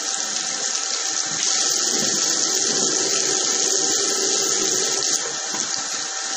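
MP3 compression damage runs throughout this recording of sounds: nothing survives above 15.1 kHz, and a plainly audible watery swirl rides on the audio. The likely cause is a bit-starved encoder, consistent with roughly 40 kbps, cutting the treble and flickering weak frequency lines between frames.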